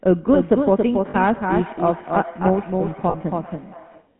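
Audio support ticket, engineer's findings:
Doubled audio track: second copy of the whole signal mixed in, likely a parallel capture path or misaligned edit. Full-band duplicate trailing by roughly 300 ms, around 5 dB down. Dry, no room colour, heard as a flat slapback under the speech.

GSM full-rate codec: speech passed through a GSM full-rate channel, consistent with 13 kbps coding. Band limited to 150 Hz to 3.5 kHz, nothing above. Pulse-excited vocal tract model leaves a plainly audible buzzy, gravelly roughness throughout.

Lost GSM frames: two dropouts, 1.10 to 1.15 s and 3.10 to 3.15 s, each 40 ms, fitting two lost 20 ms frames. Last good frame repeated, so the sound hangs briefly as a rough metallic ring.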